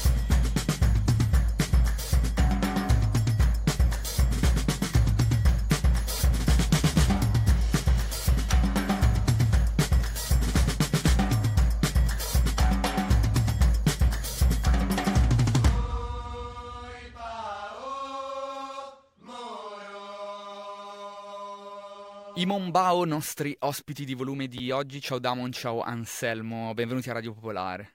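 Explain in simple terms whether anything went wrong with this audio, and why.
Something did go wrong, briefly, at about 24.58 s: chunks out of order. A tiny slice of audio, roughly 6 ms long, turned up two slices late and played after the ones meant to follow it. Nothing's missing, but the shuffle leaves a quick jumbled flick.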